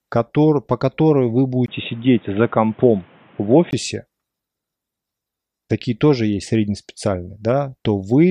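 Right after "который по которой вы", at 1.66 s, a 20 ms gap opens and the speech turns boxy, with nothing above 3.8 kHz, until 3.73 s. The likely cause is the input switching to a poorer device. A fresh noise floor about 35 dB down and unchanged loudness set it apart from plain filtering.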